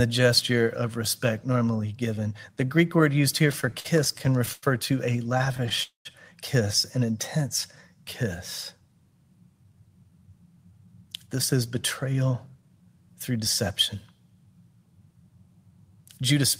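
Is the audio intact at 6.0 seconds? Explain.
No. A call audio freeze runs from 5.83 to 6.07 s: the last sound smears into a fading buzz, then about 140 ms of silence, likely from delayed packets starving the jitter buffer. Unlike a dropout, nothing is lost; the audio resumes where it stopped, about 221 ms late.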